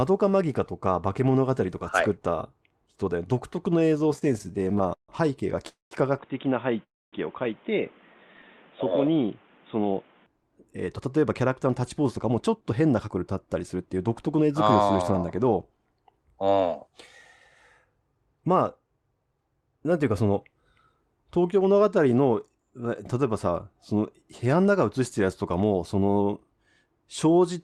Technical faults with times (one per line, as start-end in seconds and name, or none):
3.79-5.11 repeated stalls (stutter)
5.68-5.94 call audio freeze
6.18-10.26 input switched to a poorer device
6.83-7.16 call audio freeze
8.34-8.85 jitter buffer slow-down
10.60-14.82 jitter buffer speed-up